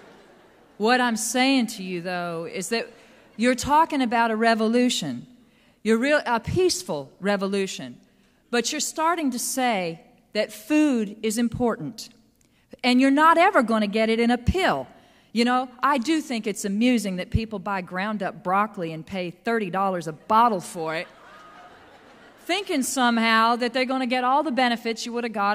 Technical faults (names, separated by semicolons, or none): none